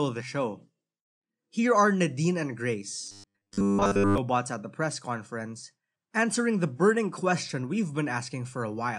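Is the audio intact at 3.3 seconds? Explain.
No. From 3.07 to 4.18 s the speech turns into robotic sound from repeated short buffers, likely because new audio arrived too seldom and short stretches were looped to fill the gaps, with most of the real audio skipped. The loop imposes a rigid 100 Hz buzz, which fits a 10 ms buffer, so the sound goes metallic while loosely tracking the speech. A spectrogram shows flat, evenly spaced harmonics at multiples of 100 Hz. The waveform repeats near-identical 10 ms cycles.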